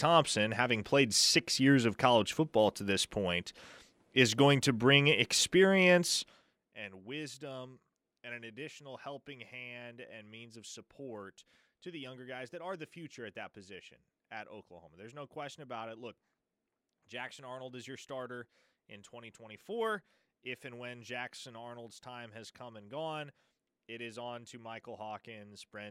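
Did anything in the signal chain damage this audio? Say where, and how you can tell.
No, nothing in the chain from capture to playback has left an audible mark on this speech signal, which holds a continuous, undistorted waveform with steady timing throughout.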